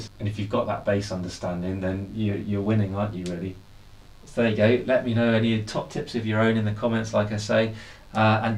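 A steady, raspy mains buzz runs under the sound from start to finish. It sits well below the main signal, roughly 35 dB down, but it never lets up. The fundamental is 50 Hz, and sharp spikes arrive twice per mains cycle. Those spikes spread harmonics of 50 Hz up into the kilohertz range, which is what makes the buzz rasp rather than hum. A dimmer, rectifier or missing shield is letting this interference into the audio path.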